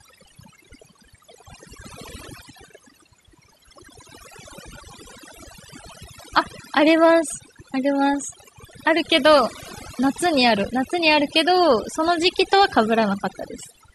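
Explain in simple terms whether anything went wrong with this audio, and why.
Something did go wrong, from start to finish. The recording suffers from overdone noise removal. A noise-cleaning tool was set too strong. It listens for the background noise, then shuts off any sliver of sound that seems close to it. Quiet parts of the speech get caught too. So the gaps drop away and break up into twinkling specks.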